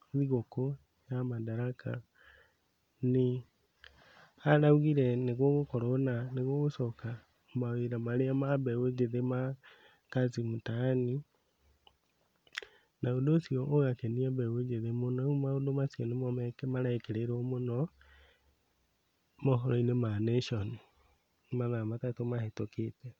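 Nothing in this recording trips any of the fault checks, so there's no problem here to pin to a moment or explain.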